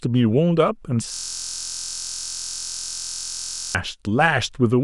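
From 1.14 to 3.75 s, a system hang loop occurs. The system froze, replaying one 23 ms buffer. It sounds like a steady 43 Hz buzz.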